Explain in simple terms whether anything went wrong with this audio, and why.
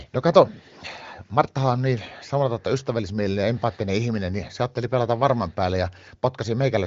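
Nothing went wrong with this audio; the speech comes through as it should.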